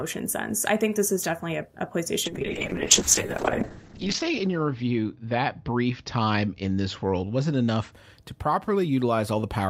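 A call bitrate drop runs from 2.26 to 7.98 s in this speech clip, just after "is definitely a a". The encoder starved of bits, which fits a fall from about 64 to 10 kbps, codes coarsely and cuts the top band from 20 kHz to 8 kHz, leaving a rough, muffled sound at its worst for 1.63 s.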